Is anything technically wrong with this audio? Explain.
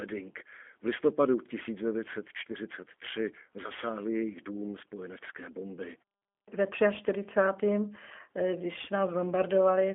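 Yes. G.729 codec coding runs throughout the clip. The speech is confined to roughly 250 Hz to 3.4 kHz, which gives the thin, boxy telephone quality. Inside that band, the coder rebuilds the speech from a vocal tract filter, a pitch predictor and a few pulses per frame rather than preserving the waveform. The result sounds plainly rough and slightly synthetic, the way a G.729A stream at 8 kbit/s would.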